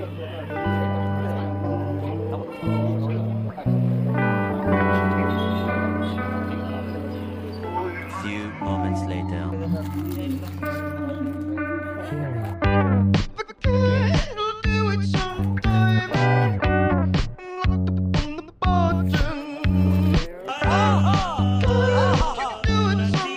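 Nothing stood out as a technical fault anywhere in the recording.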